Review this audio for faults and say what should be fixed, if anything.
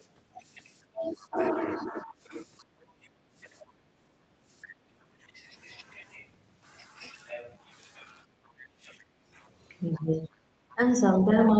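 Speech suppressed in double talk occurs from 0.91 to 2.88 s, with roughly 0.7 s of that span affected, and again from 9.01 s to the end. The speech dips by as much as roughly 25 dB. The likely cause is the echo canceller failing to separate near-end speech from loudspeaker echo while both sides talk, so it attenuates both. A double-talk detector that holds suppression back when near-end energy is strong would prevent this.

The other side's voice leaking through appears as brief scraps at 1.16 to 1.26 s and 2.59 to 2.64 s, around 35 and 40 dB below the speech. A sustained stretch follows from 9.93 s to the end, only about 20 dB down. Residual loudspeaker echo is likely reaching the microphone past the canceller. Better acoustic isolation or a longer, better-converged adaptive filter would prevent it.

Background gated by the echo canceller cuts the room sound during 3.16 to 5.20 s (about 1 s affected in total), 8.25 to 8.73 s, and 10.41 to 10.46 s. 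The drops are about 15, 16 and 12 dB. The canceller clamps the microphone hard while the loudspeaker plays, then releases. Comfort-noise fill and gentler residual suppression would prevent these dropouts. The call microphone processing band-limits the audio to 8 kHz.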